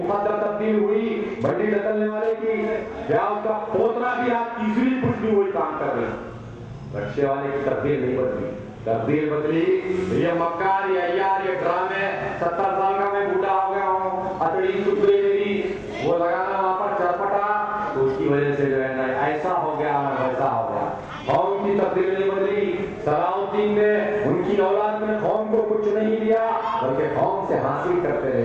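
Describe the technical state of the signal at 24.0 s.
At 24.0 s the signal carries channel delay (doubling), present throughout: one channel arrives about 42.67 ms late, which fits a 2048-sample buffer. Summed to mono, it gives a distinct same-level slap repeat rather than comb-filter coloration.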